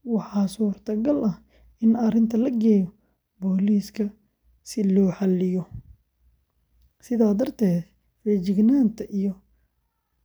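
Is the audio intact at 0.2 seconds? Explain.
Yes, the audio is intact at 0.2 seconds, with no fault present at that moment.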